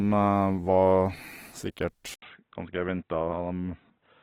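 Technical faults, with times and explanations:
Throughout, Opus compression: the speech sounds grainy and rough rather than swirly, likely from Opus's music mode at a low rate, around 16 kbps, filling starved bands with noise.
2.14 to 4.23 s, input switched to a poorer device: after an 80 ms gap, nothing remains above 3.8 kHz, with faint new hiss but similar loudness, likely a narrower-band microphone.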